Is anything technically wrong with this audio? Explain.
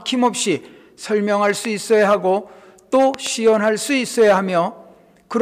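Yes. Loud pops occur at 1.65 s and, as a double pop, between 3.14 and 3.29 s, peaking about 10 dB above the sound, which continues underneath. They are likely voltage pulses from a plug, switch or static, and show as tall waveform spikes and thin vertical broadband stripes on a spectrogram.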